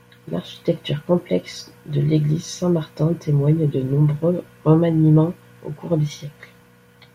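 Nothing technical goes wrong anywhere in this bit of speech, so there's no fault to point to at any moment.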